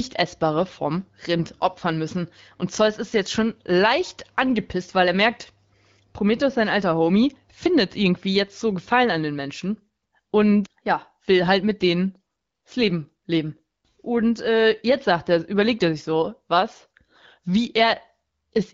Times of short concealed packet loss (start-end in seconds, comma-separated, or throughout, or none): none